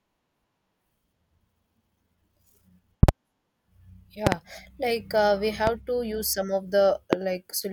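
Loud pops break into the speech four times. A double pop runs from 3.03 to 3.11 s. Another double pop runs from 4.27 to 4.35 s, just before "like uh we". Single pops follow at 5.67 to 5.70 s, before "to use some of", and at 7.13 to 7.15 s. Each peaks around 20 to 25 dB above the speech. They sound like sharp thumps, with the talking carrying on beneath. A sudden voltage spike, likely from a switch, static or a driver glitch, entered the signal.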